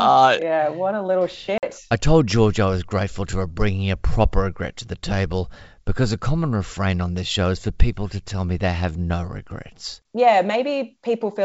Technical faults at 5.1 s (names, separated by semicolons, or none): none